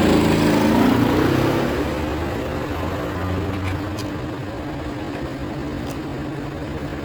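From 1.91 s onward, the pace abruptly slows to 0.72 times while pitch holds, so the audio drags: a time-stretched section, likely software repeating short pieces.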